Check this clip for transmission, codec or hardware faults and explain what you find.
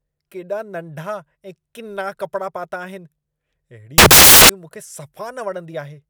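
One fault is present in this speech clip. Samples built from the wrong bytes, 3.98 to 4.49 s: the reader misassembles each sample's bytes, so the jittery low bits dominate and the speech becomes loud, harsh broadband noise.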